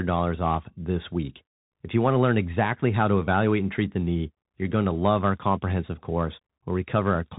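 From start to finish the speech carries the sound of a Bluetooth CVSD headset codec. Nothing above about 3.8 kHz survives, so the voice is boxed into a narrow telephone band. The codec sends one bit per sample, stepping up or down, at a rate that fits 64 kbps. The step cannot always keep pace with fast, loud changes. The damage is plainly audible. S sounds turn scratchy, and a granular hiss sits beneath the speech.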